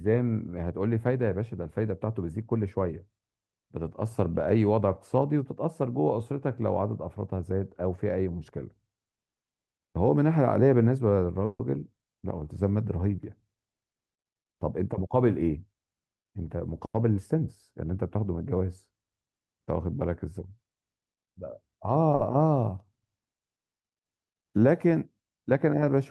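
At 11.45 to 11.61 s the speech stops for about 0.16 s. This is a call audio freeze. The last sound carries on as a fading buzz or hiss, with about 140 ms filled in all, ending in about 40 ms of silence. The likely cause is delayed packets emptying the jitter buffer. Speech resumes where it stopped, with nothing lost.

From 14.73 to 16.05 s comes a jitter buffer speed-up. The receiver trims tiny pitch-period slices again and again to shed surplus delay, roughly 150 ms in all. Speech runs at 110 percent speed. Pitch stays the same, but the delivery sounds hurried.

At 22.15 to 22.21 s there is a short stall from a late packet. A packet missed its slot, so the receiver stretched the last sound for 40 ms. That sound is held too long, with a faint buzz or dip. The speech then picks up with nothing missing. Through the Opus call path, the audio tops out near 12 kHz.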